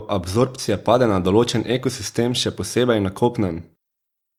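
No technical faults can be heard anywhere in the speech. There is nothing here to place on a timeline.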